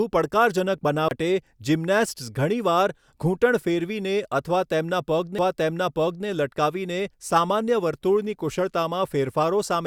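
Two CD skips show up in this speech. The first runs from 1.08 to 1.11 s: the player drops out for around 30 ms and picks up again from a different spot, so there's a tick and the speech lurches. The second, at 5.38 s, is a tiny dropout of just a few milliseconds with the same jolt. Both times the laser jumped, from a knock or a flaw, onto another turn of the disc's spiral, muted briefly, and carried on from there.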